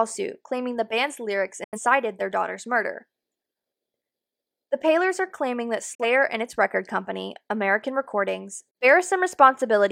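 A speech clip with two digital broadcast dropouts. The first runs from 1.64 to 1.79 s, between "claiming the band's lyrics" and "their daughter's murder". The second runs from 5.95 to 6.04 s, between "are claiming that" and "and its record company". Each time the sound fades out in about 3 ms and goes silent. The receiver has muted on bad or missing frames. The gaps point to about two lost frames, then one.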